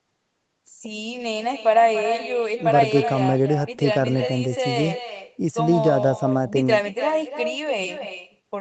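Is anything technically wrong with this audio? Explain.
Yes, there's an echo with no canceller all the way through: the far end's loudspeaker feeds its mic, so every phrase returns roughly a third of a second later, about 8 dB down. The band stops at 8 kHz, which fits a wideband Opus call.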